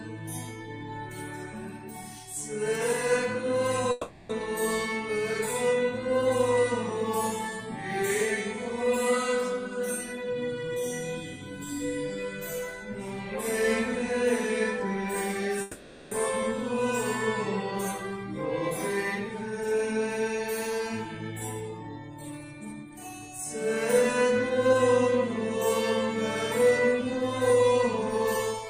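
At 3.91 s and again at 15.61 s, the sound turns into a fading buzz for about 0.4 s and 0.5 s, then resumes with material missing. A long network dropout is the likely cause.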